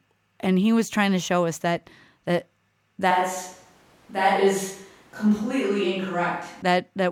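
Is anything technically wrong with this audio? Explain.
Yes. From 3.11 to 6.62 s the speech turns roomy and hollow, with thinner bass and background noise about 35 dB below it, then snaps back. This is a switch to a distant microphone, likely because the close one dropped out. Unlike added reverb, the change is abrupt and brings in room noise.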